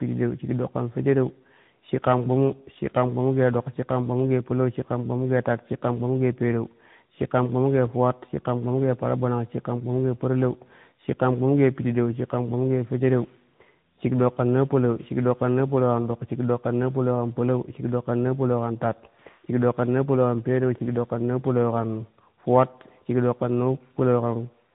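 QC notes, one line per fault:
throughout: tandem speech coding. The speech sounds re-coded three times over, consistent with two CVSD-like stages and a final AMR-NB stage near 10.2 kbit/s, each compounding the last one's damage, so it turns rough, muffled and warbly. Spectrogram: hard ceiling at 3.8 kHz, smeared formants.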